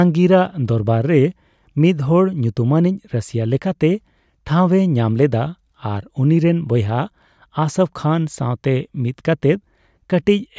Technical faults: none

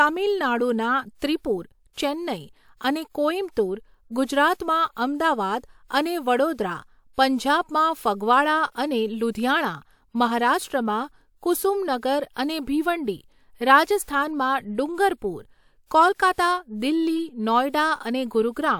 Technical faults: pre-echo

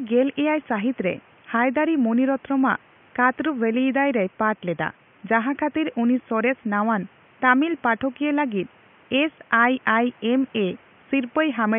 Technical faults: none

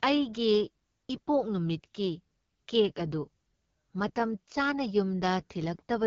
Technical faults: AMR wideband (HD Voice) codec

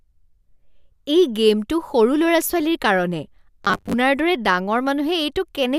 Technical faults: robotic sound from repeated short buffers

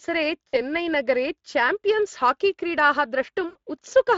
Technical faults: Speex codec; VoIP packet loss concealed by the speech codec

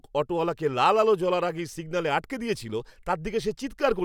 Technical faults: none

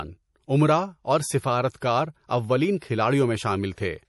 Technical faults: MP3 compression; pre-echo

